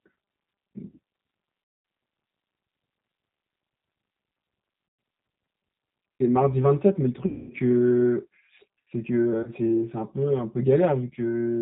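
Speech, heard through a G.729 codec: the spectrum stops dead at 4 kHz, and the rough, synthetic texture fits an 8 kbit/s stream. A spectrogram shows an empty band above 4 kHz. Channel delay (comb filtering) runs throughout. One channel lags by around 5 ms, so the mono sum sounds hollow. The spectrogram shows fixed, evenly spaced dark notches, the first near 100 Hz. VoIP packet loss concealed by the speech codec occurs four times: 1.64–1.85 s (210 ms), 4.88–4.99 s (110 ms), 7.26–7.54 s (240 ms) and 9.43–9.50 s (40 ms). In each gap the decoder stretches the last sound into a fading buzzy tone or coloured noise. The waveform shows a repetitive, decaying envelope, and the spectrogram shows smeared, static harmonics.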